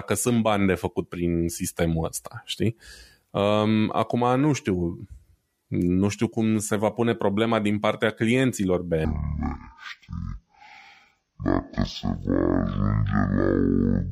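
From 9.05 s to the end, the speech falls an octave and plays at half speed. This is stereo read as mono: left and right samples are taken in turn as one channel. Unlike a plain slowdown, it leaves a faint mirrored copy in the upper spectrum.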